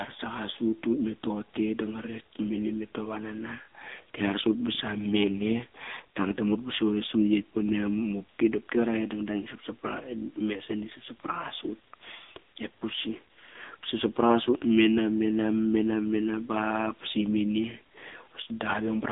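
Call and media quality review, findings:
AMR narrowband mobile codec, throughout: low-rate AMR-NB encoding, consistent with a mode near 6.7 kbps; speech band-limited to 200 Hz to 3.7 kHz, nothing above 3.8 kHz, heavily buzzy and synthetic.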